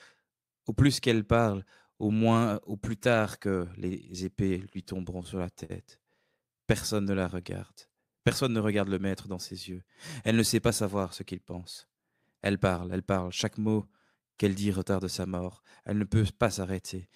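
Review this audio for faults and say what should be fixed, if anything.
Between 4.83 and 5.72 s the speech drags and stutters through five brief stalls, the longest about 50 ms: repeated stalls, where late packets emptied the jitter buffer and the receiver stretched the last sound. A deeper or adaptive jitter buffer, plus a steadier network path, would prevent these stalls.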